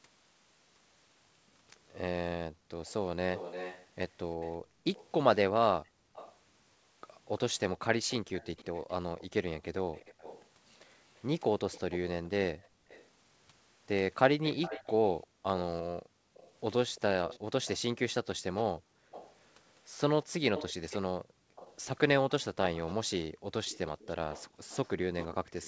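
A speech recording carrying two call faults. The background is gated by the echo canceller at 2.51–2.7, 4.59–6.14, 12.69–12.88, 15.27–16.34, 18.76–19.11, 21.21–21.55 and 23.3–24.63 s. Each time, the room tone ducks by about 27 to 40 dB for a few hundred milliseconds, showing as dark vertical gaps on a spectrogram and flattened stretches of the waveform's noise floor. From 2.86 s to the end there is an echo leak. A faint copy of the speech, well below the direct sound, trails it by 345 ms, likely from far-end loudspeaker pickup the canceller failed to remove. On a spectrogram it appears as ghost harmonics shifted right of each phrase.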